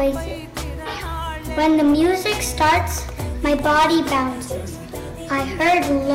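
Hard clipping appears at 0.02 to 0.09 s with about 3 dB of overdrive, then at 1.59 to 2.81 s with about 10 dB and from 3.45 s. Peaks hit a ceiling and are cut flat, adding high harmonics. The result is a hard-edged fuzz rather than the rounded warmth of soft saturation. Within that span, at 3.59 s, a block of digital silence only 0.36 ms long, which fits a 16-sample block, drops the signal to zero and back with no fade. It sounds as a sharp tick, not a gap, and differs from the clipping by its instant, single-point onset. The clipping segment runs on to 4.23 s at about 11 dB, and clipping returns at 5.33 to 6.15 s with about 8 dB of overdrive.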